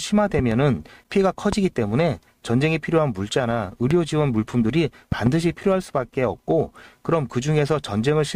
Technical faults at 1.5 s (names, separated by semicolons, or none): loud pop